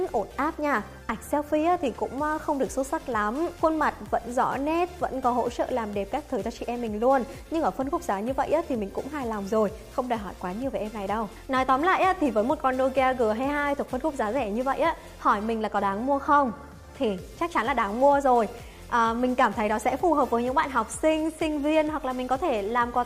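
Nothing stood out as a technical fault on listening to this recording.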